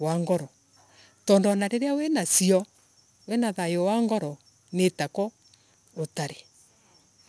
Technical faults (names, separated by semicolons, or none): aliasing